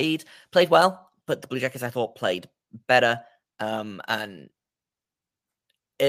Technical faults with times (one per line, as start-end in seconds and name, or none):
none